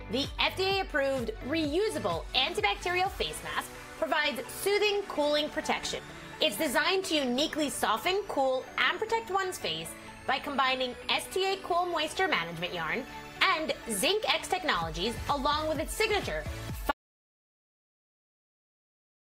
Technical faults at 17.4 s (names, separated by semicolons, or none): audio dropout to silence